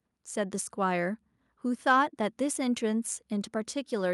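Speech, with no technical fault to be heard anywhere in the recording. Nothing in it calls for a time or a cause.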